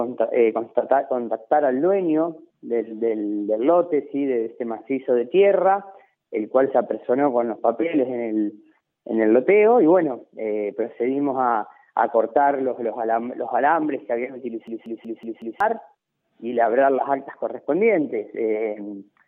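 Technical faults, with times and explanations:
14.68 to 15.60 s, system hang loop: the playback system stalled while the audio hardware kept reading the same ring buffer, so one 186 ms slice of sound repeats exactly five times, which fits an 8192-sample buffer. A loop that long comes round at about 5.4 Hz, slow enough to hear as a hard, machine-gun stutter rather than a buzz, and the audio that should have played during the stall, about a second of it, is missing.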